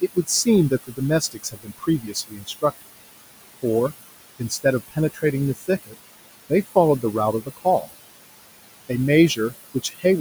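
Noise suppressor artifacts run through the whole speech clip. The suppressor treats the room noise, sitting about 13 dB under the speech, as steady background and pulls it down by about 19 dB frame by frame. As a result, the noise floor dips in the gaps and comes back up beneath the talking.

Speech cut by the noise suppressor appears in five stretches: 0.01 to 2.87 s, 4.39 to 5.23 s, 5.56 to 5.95 s, 7.46 to 7.88 s and 9.3 to 10.05 s. In each, the suppressor misreads low-level speech energy as noise and attenuates it with the background, by about 21 dB at worst in the opening stretch, about 19 dB in the next two, about 15 dB near 7.5 s and about 17 dB near 9.3 s. Only parts of each window are hit, around a second in total in the first and a fraction of a second in the others. Soft consonants and word tails there come across swallowed or faint.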